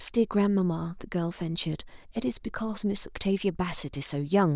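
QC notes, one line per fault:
No technical faults can be heard in the signal.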